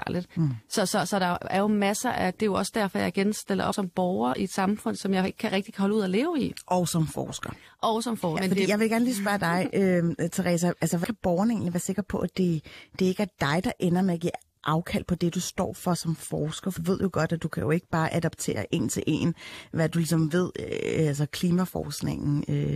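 The speech jumps ahead at 3.72, 8.36, 11.03 and 16.77 s. Those are compressed frames skipped, losing roughly 0.1 to 0.3 s each time. Each jump fits dropped frames of about 23 ms each.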